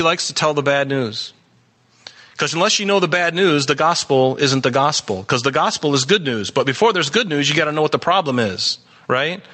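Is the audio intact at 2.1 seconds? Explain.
No. Gain pumping runs through the whole clip, including 2.1 s. The gain swings by around 15 dB, likely a fast limiter clamping excessive gain.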